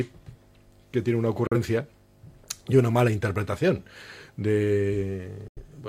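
At 1.47 s and 5.48 s the sound drops to silence in a digital broadcast dropout. The receiver muted after bad frames and lost 43 ms, then 85 ms, which fits one and two frames. Unlike concealment, each is a 3 ms fade into true silence, and nothing is patched over.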